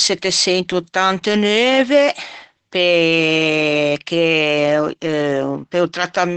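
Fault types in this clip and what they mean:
Opus voice compression: The speech runs through a low-rate linear-prediction coder, likely near 12 kbps, with nothing above about 8.7 kHz. It sounds muffled, hoarse and slightly robotic throughout.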